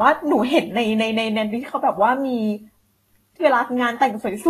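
Speech runs with plainly audible Vorbis compression damage from start to finish. The treble is hissy and grainy, consonant onsets are smeared, and tonal parts of the sound take on a rough edge. Nothing is present above 14.2 kHz, where the encoder has cut the band off. The treble that remains has been quantised so coarsely that fine detail is replaced by noise of similar energy, which fits a low bitrate of about 32 kbps as the likely cause.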